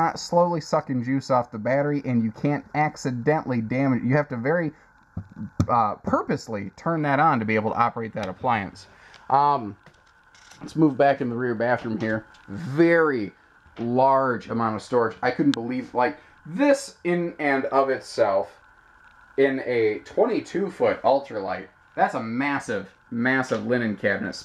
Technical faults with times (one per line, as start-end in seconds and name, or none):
0.00-6.98 channel delay (comb filtering)